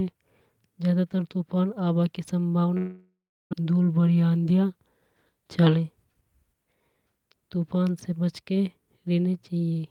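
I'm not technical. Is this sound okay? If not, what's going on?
No. At about 2.77 seconds the speech breaks off. What you hear instead is a brief buzzy continuation of the last sound that fades away, then about a third of a second of silence. Normal speech returns at 3.55 seconds, but roughly 0.6 seconds of what was said never arrives. This is likely a long network dropout: the connection stopped delivering audio, so the receiving end padded the gap and then carried on after the missing part.

From 5.49 to 6.45 seconds the speech sounds slightly rushed, running about 9 percent faster while the pitch stays the same. This is a jitter buffer speed-up. A batch of delayed audio arrived together, so the receiver was holding more than it wanted. To catch up, it quietly removed many tiny slices, around a tenth of a second in total, which makes that stretch feel hurried.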